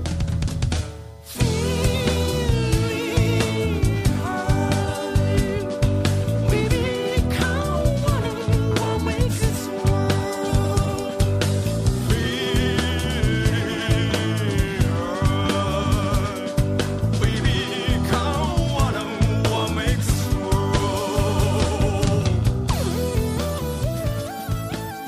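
A steady USB whine runs throughout, a fixed tone at 1 kHz, strongest at 2 kHz, roughly 40 dB below the signal, from the bus's 1 ms frame current leaking through power or ground.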